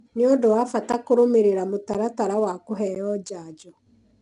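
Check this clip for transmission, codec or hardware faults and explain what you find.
Two faults here: ADPCM coding across the whole clip, and three tiny dropouts at regular spacing.

The 4-bit ADPCM compression runs throughout. Each sample is coded as a coarse step from a prediction, so the speech carries a gritty hiss that rides its level and smears sharp attacks. Nothing sits above 10.7 kHz, and the damage is plainly audible, which fits about 89 kbps.

The gaps between chunks hit at 0.92, 1.94 and 2.95 s, each a 12 ms hole, spaced 1.0 s apart. The audio arrived in one-second chunks with silence left at each join, so the speech briefly cuts out and resumes.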